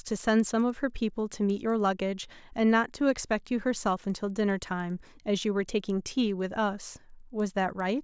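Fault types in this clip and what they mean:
Resampler restarted on every block: the rate converter handles each block in isolation, without neighbouring samples at its edges, so every 100 ms boundary carries an error. Here it sounds as ticks at 10 Hz under the speech, consistent with a 44.1 kHz to 16 kHz conversion.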